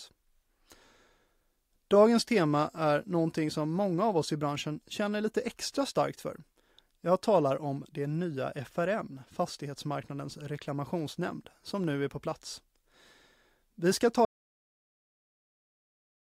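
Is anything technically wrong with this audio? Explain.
Yes, there's one problem. At 14.25 s the speech cuts out mid-flow and never comes back: an audio dropout to silence that runs right through to the end of the clip. The gap is silent, with no room tone or background hiss at all. That most likely means the input got lost, maybe a device dropping off, a failed link or a mute, while the recorder kept writing silence. Whatever was said after that point is simply gone.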